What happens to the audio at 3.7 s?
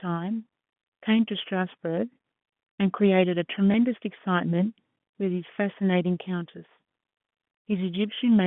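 At 3.72 to 3.74 s, packet loss with last packet repeated: one 20 ms stretch went missing and the previous chunk replayed, giving a brief small blip.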